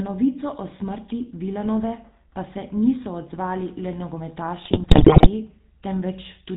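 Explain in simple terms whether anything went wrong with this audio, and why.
The whole recording has a buzzy, gravelly roughness and sounds muffled, with no crisp high tones. That is the GSM full-rate codec, an early mobile-phone speech compressor that rebuilds the voice from a simple model driven by rough pulses and discards everything above 4 kHz.

From 4.62 to 5.28 s the speech breaks up into squawks, pops and a gargling sound. These are GSM bit errors: on a weak phone link, corrupted data reached the decoder, which then rebuilt those moments with warped tone and jumps in loudness.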